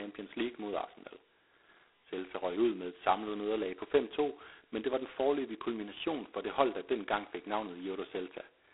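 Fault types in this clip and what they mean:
G.726 ADPCM: the speech runs through a telephone-style adaptive coder for the whole clip, so each sample goes out as a tiny coded difference from a predicted value. The damage here is heavy, with a coarse, rasping hiss riding on the speech that rises and falls with its level. That fits the lowest 16 kbit/s mode, with only 2 bits a sample. The band sits at about 300 Hz to 3.5 kHz, and nothing gets through above 3.9 kHz.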